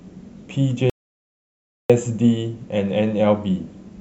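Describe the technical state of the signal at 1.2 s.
At 1.2 s the signal sits inside an audio dropout to silence that runs from 0.90 s to 1.90 s, roughly one second of lost speech. The speech cuts off abruptly and the gap is silent: no room tone, no noise floor, nothing. The likely cause is the input being lost, through a disconnected device, a failed link or an accidental mute, while the recorder kept writing silence until the signal returned.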